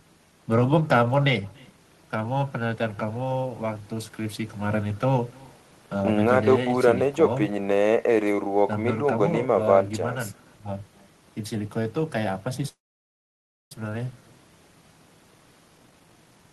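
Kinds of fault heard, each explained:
Echo with no canceller, throughout: The far end plays the call over a loudspeaker, and its microphone picks that playback up again with nothing removing it, so the speech returns after a network round trip. Here every phrase is trailed by a faint, thin copy at about 27 dB below the direct speech, arriving roughly a third of a second later. It is quiet but constant across the whole recording.
Call audio freeze, 12.68 to 13.72 s: The sound stalls for about 1.03 s. The receiver briefly stretches the last sound into a short fading tail, then goes silent for 0.96 s before resuming exactly where it left off. Nothing is lost; a gap has simply been inserted, pushing everything after it about a second later. The likely cause is packets held up in transit, leaving the jitter buffer empty until they arrive.
Jitter buffer speed-up, 15.78 to 16.52 s: In the final stretch the speech runs at 148% of normal speed while keeping its pitch, so it sounds hurried. 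The receiver is draining excess buffered audio by repeatedly cutting out short slices one or a few pitch periods long. Around 0.4 s of audio is removed in this way.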